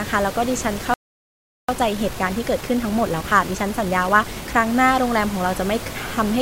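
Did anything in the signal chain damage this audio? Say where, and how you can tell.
Yes. A playback stall runs from 0.94 s to 1.69 s: the speech halts mid-flow for about 0.75 s of silence, then resumes. This points to the playback stage, likely a player buffer that ran dry or a blocked output thread, leaving nothing to send to the output.

Time-compressed catch-up follows from 1.69 s to 4.67 s. The speech is hurried to 1.25 times normal speed with its pitch unchanged. The player is trimming its backlog by cutting small slices and cross-fading the joins.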